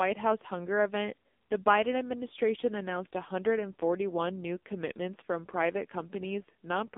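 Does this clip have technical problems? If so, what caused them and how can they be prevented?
Yes. Throughout the speech, the voice sounds buzzy, thin and synthetic, with nothing above about 3.7 kHz and little below 250 Hz. This is heavy damage from the AMR narrowband mobile codec. Its vocal-tract model, fed too few pulses, fits a low mode near 6.7 kbps. Recording over a wideband or higher-bitrate path, or capturing locally instead of through a phone call, would prevent it.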